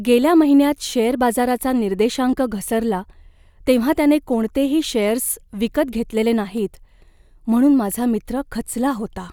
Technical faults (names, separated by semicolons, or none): dropped samples